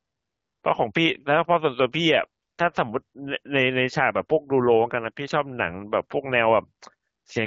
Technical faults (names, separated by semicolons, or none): none